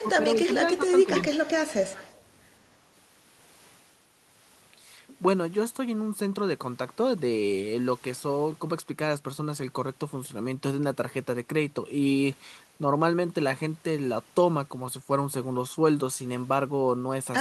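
A faint delayed copy of the speech, roughly 25 dB down and trailing by 169 ms, is audible from 0.00 to 0.08 s. This is echo leak, likely from a far-end echo canceller letting its loudspeaker's pickup return down the line. From 0.02 to 0.07 s, 0.36 to 0.88 s and 1.05 to 1.10 s, the speech dips by roughly 10 dB in short patches. This is speech suppressed in double talk, likely from the canceller mistaking overlapping talk for echo and attenuating both. The echo returns from 1.21 to 1.51 s at a similar level and again from 1.67 to 2.19 s, slightly louder at about 20 dB down.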